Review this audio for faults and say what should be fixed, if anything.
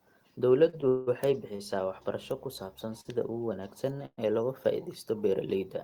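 Short stalls from a late packet occur at 0.69 s, 1.56 s and 3.01 s. Each time the jitter buffer ran dry and the last sound was stretched by about 35, 30 and 42 ms, then playback resumed with nothing lost.

Call audio freezes occur at 0.88–1.09 s and 4.06–4.20 s. The speech turns into a held, fading buzz or hiss for 187 ms and then 119 ms, and the second ends in about 30 ms of silence. Both are likely caused by packets delayed in transit.

A larger or more adaptive jitter buffer, together with a more stable network path, would prevent both kinds of fault.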